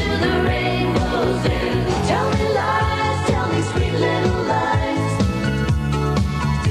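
From 3.00 to 5.00 s the audio drops to an adaptive stream at a lower bitrate, which happens when a slowing connection makes the player switch to a cheaper encoding. The sound dulls abruptly, with nothing above 12.3 kHz, which fits a switch to a very low-bitrate HE-AAC rendition. On a spectrogram the upper band is sharply sliced off for exactly those two seconds, while the waveform continues with no gap.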